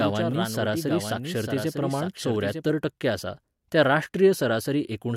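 A second, slower capture path, or an edit that left two copies out of step, is the likely cause of the doubled audio track already under way when the clip begins and lasting until 2.7 s. The speech is mixed in twice: a full-band copy trails by roughly a second, about 5 dB quieter, with no decay or room colour. At 2.7 s the copy cuts off abruptly.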